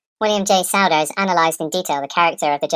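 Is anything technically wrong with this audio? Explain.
Yes. The speech has a wrong sample rate from start to finish. The samples are being played faster than they were captured, with no rate conversion in between. Everything runs about 1.45 times too fast, and pitch rises by the same ratio, about 6.45 semitones. That fits audio recorded near 22 kHz and played back at 32 kHz. The voice sounds high, thin and hurried, with syllables rushing together.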